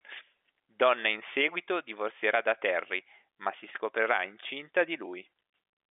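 No technical faults can be heard anywhere in the speech. It carries the narrow sound of G.711 telephone coding, with the band running from about 300 Hz to 3.6 kHz and nothing audible above roughly 3.8 kHz.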